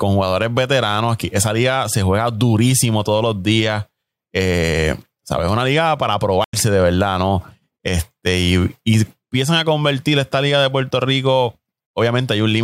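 At 6.44 s a stream reconnect occurs: the connection dropped and the player restarted its decoder mid-stream. After "liga para" the speech cuts to about 82 ms of silence, then resumes at 6.54 s on "de verdad", jumping roughly 70 ms ahead.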